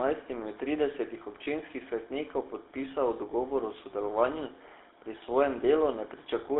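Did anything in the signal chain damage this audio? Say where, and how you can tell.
Yes. At the codec stage, the whole clip carries the buzzy, gravelly roughness of the GSM full-rate codec, band-limited to roughly 300 Hz to 3.7 kHz. The vocal tract is modelled and driven by sparse regular pulses, which fits a 13 kbps full-rate coder.

In the network stage, lost GSM frames cause a brief metallic ring from 1.44 to 1.48 s, between "od tridesetih" and "svetnikov podpisal dogovor o". The decoder repeated the last good frame's parameters, which points to a single 20 ms frame lost.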